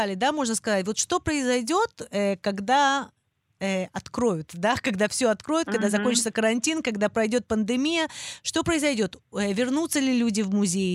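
No technical faults can be heard anywhere in this recording.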